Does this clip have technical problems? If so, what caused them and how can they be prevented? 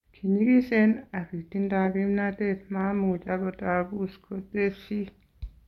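No, this clip has no technical problems, so there is nothing to prevent.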